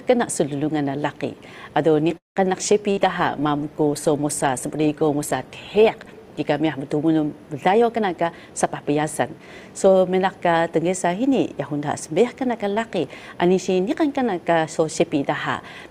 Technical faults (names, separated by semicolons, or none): call audio freeze; burst of packet loss; call bitrate drop; jitter buffer speed-up